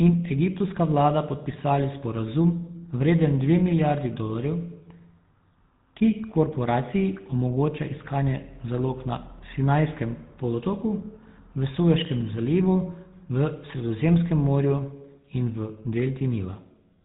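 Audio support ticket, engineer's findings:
GSM full-rate codec, whole clip, 0 s to end. Buzzy, gravelly roughness on the speech, plainly audible. Nothing above 3.8 kHz. Probable component: legacy cellular leg. Mechanism: vocal-tract model excited by regularly spaced pulses, only every third excitation sample kept, so the fine texture comes out coarse and rasping. Damage level fits the 13 kbps full-rate mode.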